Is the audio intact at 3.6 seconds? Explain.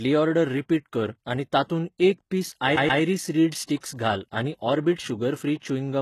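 No. From 3.64 to 3.69 s there is pre-echo: the codec spread quantisation noise across its block, so a hiss about 46 ms long precedes the attack and softens it. Unlike reverb or an echo, the smear comes before the onset rather than after it.

The whole stretch also carries heavy HE-AAC compression damage, likely from a low-rate HE-AAC v2 encode around 16 kbps. Treble is rebuilt from copied lower bands up to 12.3 kHz, so sibilants sound gritty and metallic. A plain low-pass would sound dull instead.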